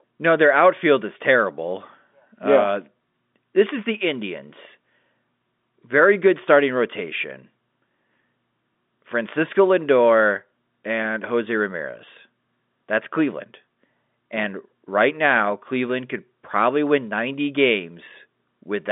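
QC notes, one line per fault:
No faults to note.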